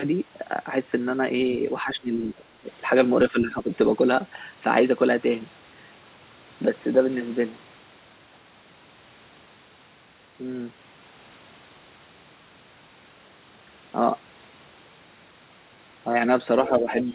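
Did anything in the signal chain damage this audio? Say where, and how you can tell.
Yes, call processing: the speech dips at 1.82–2.65 s (about 20 dB), 3.3–3.71 s and 16.68–16.9 s, likely speech suppressed in double talk by the echo canceller.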